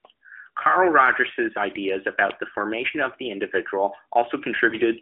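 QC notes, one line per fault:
4.70–4.77 s, lost AMR speech frame: a brief dip or warble in the narrowband speech, consistent with one 20 ms frame failing its check. The decoder bridged the gap by repeating the previous pitch and vocal tract settings at reduced gain.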